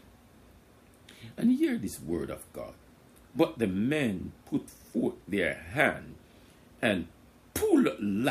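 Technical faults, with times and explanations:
No technical faults are audible anywhere in the clip, and the signal stays steady and continuous throughout, with nothing added to or taken from the source material.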